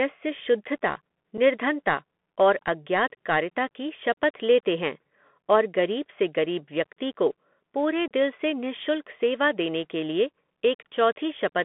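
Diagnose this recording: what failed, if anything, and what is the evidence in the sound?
Muffled telephone-band speech, nothing above about 3.4 kHz, with scratchy s sounds and granular hiss. This is the Bluetooth CVSD headset codec, whose one-bit delta steps lag behind loud high sounds.

Abrupt holes occur at 1.37 s (7.5 ms) and from 8.08 to 8.12 s (30 ms), between "गरीब व्यक्ति को पूरे" and "दिल से निशुल्क सेवा". This is unconcealed Bluetooth headset packet loss: link packets were dropped and replaced with silence or an idle pattern.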